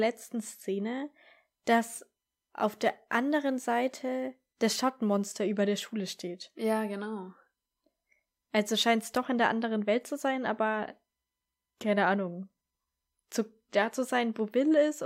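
Speech, with sample clock jitter from 1.4 to 5.26 s: a timing error of a few microseconds adds a hiss that follows loud, bright passages, showing as broadband spectrogram haze about 30 dB below the signal.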